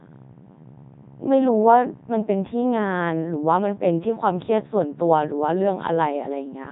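Throughout, the speech sounds robotic and buzzy with nothing above 3.8 kHz: a Codec 2 vocoder at 3.2 kbit/s rebuilt it from sine waves, discarding the original waveform.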